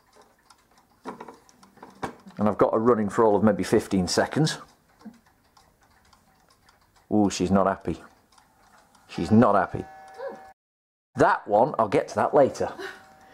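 At 10.52 s the sound cuts off mid-flow and the output stays silent until 11.16 s, a gap of about 620 ms, before the audio continues. This is a playback stall: the player has likely either run out of buffered data or had its output thread blocked, so nothing reached the output until it recovered. On resumption, playback picks up either where it stopped or at a later point.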